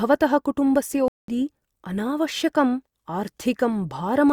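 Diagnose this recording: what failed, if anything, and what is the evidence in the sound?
A playback stall at the playback stage. The speech stops abruptly at 1.08 s and the output stays silent until 1.28 s, a gap of about 200 ms, after which the audio resumes. The likely cause is the player running out of buffered data, or its output thread being blocked, so nothing was written to the device until it recovered.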